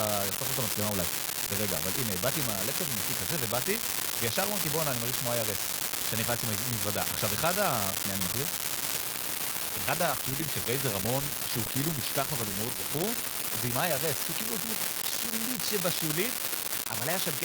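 From the first moment to the end, a steady fine crackle runs under the speech and carries on through the pauses. This is an unreliable data bit. One marginal data line flips its bit in a random share of samples, and each error adds a spike of identical size. On a waveform, equal-height spikes are scattered evenly, and they are clearest in the quiet gaps. A spectrogram shows thin broadband vertical specks across the whole clip.

From 9.02 s to 14.81 s there is a call bitrate drop. The connection's bandwidth estimate fell, and the encoder was pushed from 64 kbps down to 19 kbps, staying at its lowest for about 4.5 s before recovering. Coded this coarsely, the speech turns rough and watery, and it sounds muffled as the top end is trimmed. On a spectrogram the upper band goes dark across that span, with smeared, blotchy detail below it.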